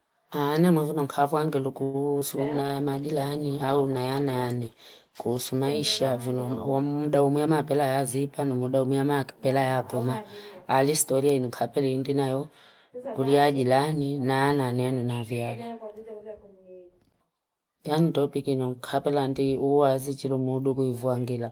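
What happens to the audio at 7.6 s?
The receiver's jitter buffer held more audio than its target, so from 7.36 to 8.58 s it repeatedly cut pitch-period pieces, about a tenth of a second overall. This jitter buffer speed-up plays the speech at 107% speed, pitch unchanged, sounding hurried before "umuyama akipela ya puma".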